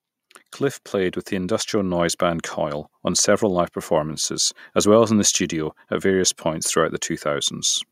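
From 0.57 to 2.51 s, automatic gain rising lifts the level by about 6 dB before "on several live performances". The gain control judged the input too quiet and raised it slowly. Unlike a speaker getting louder, the background swells with the voice.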